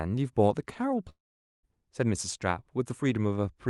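From 1.09 to 1.66 s the speech breaks off: the last sound carries on briefly as a fading buzz, then roughly half a second of near-silence follows before speech resumes with that stretch missing. This is likely a long network dropout, concealed by the receiver, on a call path whose Opus codec limits the audio to about 12 kHz.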